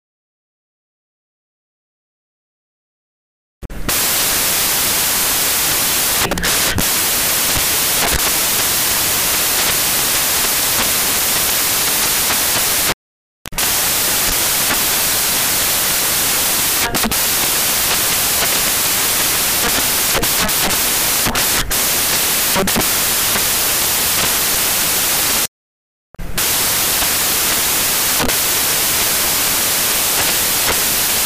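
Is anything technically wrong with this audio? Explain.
Yes. Throughout, the samples are built from the wrong bytes: misassembled bytes push the fast-changing low bits into the high positions, so the audio becomes loud, harsh broadband noise, close to white on the loud passages.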